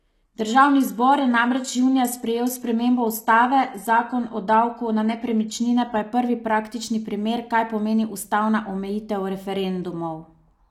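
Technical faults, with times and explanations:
0.0–6.0 s, adaptive stream starting at a low bitrate. The speech opens thin and processed, with nothing above 12.3 kHz. The treble sounds synthetic and codec artefacts are strong. That fits a very lean HE-AAC stream, around 16 kbit/s. The player chose it to start fast. At 6.0 s, just before "je prvi praktični primer", it has measured the connection and switches up. The sound suddenly becomes fuller and cleaner, with no gap. That suggests AAC-LC at about 96 kbit/s.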